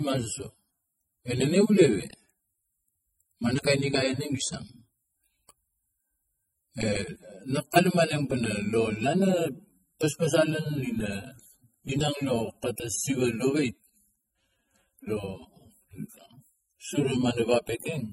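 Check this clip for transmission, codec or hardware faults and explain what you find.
One codec-related fault runs through the whole clip: the speech shows the layered damage of transcoding between lossy codecs. Nothing is present above 15.9 kHz. The smeared, swirly texture of low-bitrate AAC sits under a coarser MP3 graininess, which points to a chain of roughly 24 kbit/s AAC then 48 kbit/s MP3 as the likely cause. The MP3 stage re-encodes the first codec's artefacts instead of the original sound. Two distinct artefact characters heard together, rather than one, set it apart from a single low-bitrate encode.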